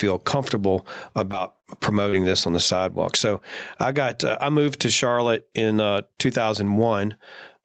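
Throughout the speech the level breathes, with a swing of roughly 15 dB. This is gain pumping, most likely from a microphone gain set far too high with a fast limiter or compressor clamping it on every peak. Loud and soft passages end up squashed toward the same level. A noise gate would instead cut the background to silence in the pauses.

At 1.31 to 1.34 s a short concealed packet loss leaves about 20 ms missing. The receiver continues the previous sound for around 10 ms and blends back, which gives a brief smear. Within that span, from 1.32 to 1.34 s, a lost packet rebuilt from error correction takes over, and another follows at 1.38 to 1.40 s. Each rebuilt 20 ms stretch plays without a gap but sounds rougher and grainier than its surroundings.

At 1.60 to 1.65 s a longer concealed loss, about 40 ms missing with roughly 30 ms filled, produces an audible wobble as the guessed continuation drifts. 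A further 20 ms rebuilt packet comes at 1.83 to 1.85 s. The last concealed loss, at 2.09 to 2.14 s, fills about 29 ms before a rebuilt packet at 2.12 to 2.14 s.

Concealment invents sound by extending what came before, so it smears or wobbles. Error-correction recovery plays a real but coarse copy of the lost audio, so it comes through intact, only noisier. Everything in the clip stops at 8 kHz, consistent with the call's Opus path.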